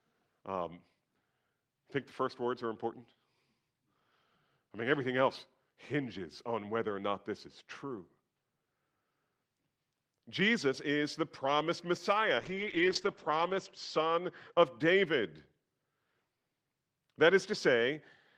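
From 12.37 to 14.77 s, after "is the promised", the speech turns rough and muffled, losing content above 8 kHz. This is a call bitrate drop, which fits 32 kbps falling to 10 kbps.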